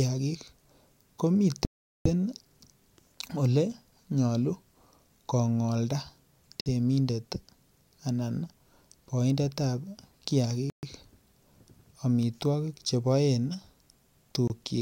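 A wireless link that likely lost packets to interference let the receiving buffer run empty, so playback halted until retransmitted data arrived. This Bluetooth stall cuts the speech to silence four times before it carries on: from 1.65 to 2.05 s (about 0.4 s), 6.61 to 6.66 s (54 ms), 10.70 to 10.83 s (130 ms) and 14.48 to 14.50 s (24 ms). The longest gap is a hole of about 0.4 s, while the shortest are brief dropouts.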